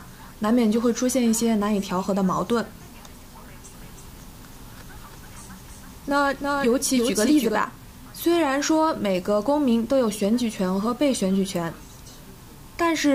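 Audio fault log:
3.74–7.56 s, doubled audio track: a second copy of the signal, likely captured again through a slower path or left out of step in an edit, is mixed in with the original. That copy trails by roughly a third of a second and sits about 5 dB lower, so every sound is followed by a distinct, full-band repeat with no decay or room colour. The repeat cuts in abruptly at 3.74 s and drops out just as abruptly at 7.56 s.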